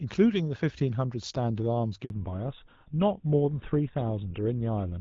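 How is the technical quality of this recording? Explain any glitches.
Two linked faults come from a network handover. Before them, the sound is clear wideband HD Voice with only light coding damage from the AMR wideband (HD Voice) codec, which fits a rate of about 12.65 kbit/s.

Handover gap: at 2.04 s the sound dies away. Silence lasts 60 ms, to 2.10 s. The phone was moving the call to another network. No speech frames arrived during the switch. Whatever was said in that moment is lost.

Fallback to narrowband: from 2.10 s to the end, nothing above 4 kHz remains. The call dropped from HD Voice to an older narrowband codec, which fits GSM full rate at 13 kbit/s. The upper band is gone. Speech turns duller and rougher.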